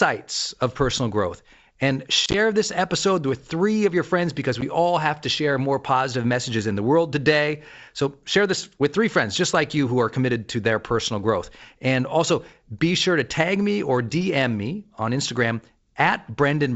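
Speech over wideband G.722 suffers packet loss on an ADPCM call: brief silences scattered across 2.26 to 2.35 s (about five packets, runs up to 30 ms) and a single 10 ms dropout at 4.61 s. These show as hard-edged vertical gaps on a spectrogram and flat-line holes in the waveform. Resumed speech returns slightly distorted while the decoder's predictor and step size resynchronise.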